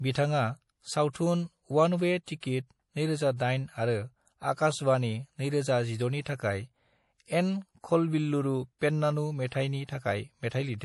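The encoder ran short of bits across the whole speech clip, and the result is plainly audible MP3 compression, likely from a low-bitrate encode around 48 kbps. Weak frequency lines drop in and out, giving sibilants a watery, swirly edge.

Pre-echo comes from the same codec spreading quantisation noise across a whole block, so the noise meant for a sharp attack leaks into the quiet moment before it. A short hiss leads each onset, softening it, at 1.12 to 1.15 s (32 ms), 2.24 to 2.28 s (40 ms), 2.40 to 2.43 s (25 ms), 6.24 to 6.26 s (23 ms), and 9.50 to 9.52 s (23 ms), just after "एन खलबिल्लुरु पेन्नानु".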